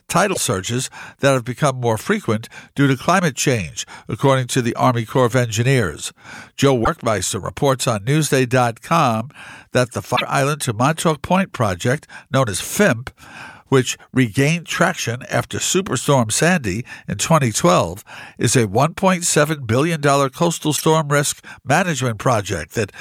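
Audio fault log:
0.30–0.37 s, 6.81–6.88 s, 10.12–10.22 s and 20.73–20.81 s: damaged data in a compressed stream. Four brief glitches, each 70 to 100 ms long, where the decoder hits corrupted frames, garbles them, loses sync and then picks up again at the next clean frame header.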